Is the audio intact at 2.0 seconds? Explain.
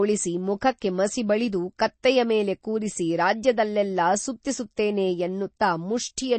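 No. Right at 2.03 s, just after "ಮುಖಕ್ಕೆ ಮಸಿ ಬಳಿದು" and before "ಮೇಲೆ ಕೂರಿಸಿ ರಾಜ್ಯದಲ್ಲೆಲ್ಲಾ", there's a pre-echo: a brief hiss, about 12 ms long, smeared ahead of a sharp onset. The codec spread its quantisation noise across the whole block, so noise meant for the loud attack leaks into the quiet gap before it, and the attack itself comes out a bit soft.

Underneath that, the whole stretch carries plainly audible damage of the kind MP3 compression leaves, likely from a low-bitrate encode, around 32 kbps by the sound of it. Nothing comes through above 8.3 kHz, and the thin upper detail flickers in and out frame to frame, giving the speech a watery, swirly edge with chirpy s sounds.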